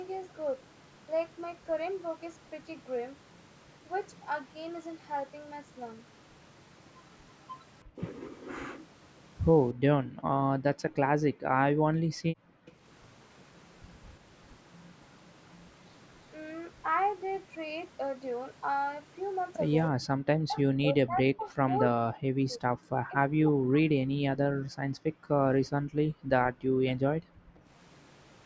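Speech recorded through a call's microphone processing, band-limited at 8 kHz, shows speech suppressed in double talk: a slight dip at 7.96–8.00 s, then heavy cuts of roughly 40 dB across 20.38–22.71 s and 23.05–24.71 s, likely from the echo canceller attenuating the talker while the far side spoke. The background is gated by the echo canceller at 9.73–12.76 s, 19.95–20.07 s and 24.99–27.68 s, where room sound falls by about 40 dB while the loudspeaker plays. At 12.66–12.72 s, a very faint echo leak appears, a copy delayed by 333 ms, likely residual loudspeaker pickup that the canceller failed to remove.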